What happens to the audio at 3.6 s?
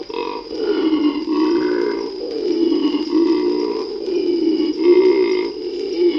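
Nothing goes wrong at 3.6 s; the audio runs through that point intact, with no dropout, click or distortion.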